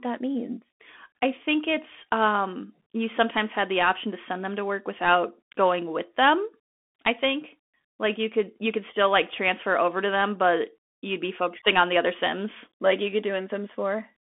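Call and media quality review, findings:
Bluetooth CVSD headset codec, whole clip: speech confined to 200 Hz–3.5 kHz, nothing above 3.8 kHz. Granular hiss and scratchy s sounds show one-bit delta coding, consistent with 64 kbps, which a clean narrowband telephone line lacks.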